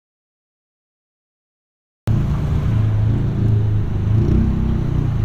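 Audio dropout to silence runs from the very start of the clip until about 2.08 s. The recording is already silent when it begins, with no room tone or noise floor at all, and the sound then arrives abruptly at about 2.08 s rather than fading in. The input was likely lost for those first two seconds through a disconnected source or a mute, while the recorder kept writing silence, so whatever happened during that stretch is missing.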